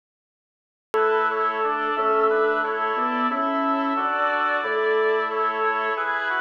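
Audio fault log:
0.00–0.94 s, cut-off start: the clip holds dead digital silence, then at 0.94 s sound appears abruptly, already under way, with no natural attack or fade-in. Capture began late, so the sound's opening was never recorded, and audio starts mid-event.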